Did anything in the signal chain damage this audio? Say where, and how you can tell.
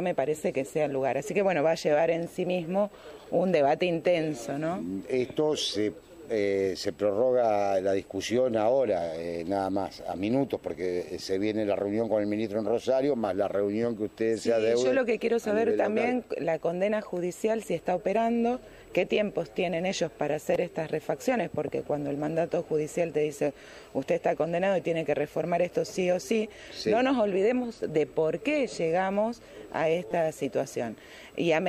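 Yes. Repeated buffer at 20.54 and 30.11 s: the driver's buffer starved and replayed a 5.8 ms block several times, heard as a click or brief buzz. This fits a 256-sample buffer.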